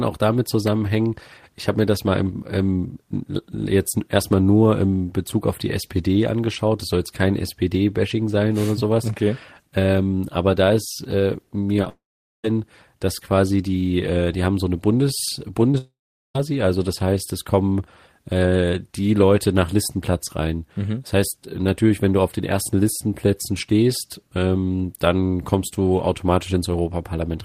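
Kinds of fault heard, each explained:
Short concealed packet loss: tiny gaps of about 10 ms at 11.76, 11.82 and 11.84 s, and 20 ms at 15.72 to 15.75 s, were patched by extending the sound just before them. They are heard as brief smears or wobbles, and unlike a dropout the speech never stops.
Long network dropout: the speech stops from 11.89 to 12.45 s and from 15.78 to 16.36 s, each time losing over half a second. A fading buzz or hiss gives way to about 0.4 s of silence before the sound resumes further on, likely because no packets arrived.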